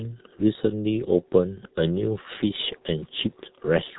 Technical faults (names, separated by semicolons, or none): G.723.1 codec